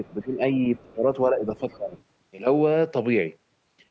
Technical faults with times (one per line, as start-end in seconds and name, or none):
0.07-0.23 other side's voice leaking through
0.24-0.41 speech suppressed in double talk
0.76-0.94 other side's voice leaking through
0.94-1.05 speech suppressed in double talk
1.30-1.47 speech suppressed in double talk
1.57-2.03 other side's voice leaking through
1.77-1.95 speech suppressed in double talk